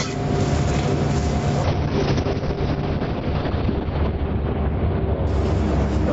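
Gain pumping runs through the whole recording of everyday sounds. The gain is pulled down by roughly 5 dB each time a loud sound arrives, which squeezes loud and soft moments closer together and leaves the result squashed. The likely cause is input gain set far too high for the microphone, with a fast limiter or compressor clamping down on every peak. A call bitrate drop begins at 1.65 s and lasts until 6.09 s. The Opus encoder was starved of bits after the call's bandwidth estimate fell, so the sound goes coarse and watery, and its top end shrinks from an 8 kHz limit to 6 kHz, dulling the brighter detail. The roughness sounds consistent with a fall from around 48 kbps to near 7 kbps, with the worst stretch lasting about 2.4 s. The 8 kHz ceiling before the drop belongs to the normal call path.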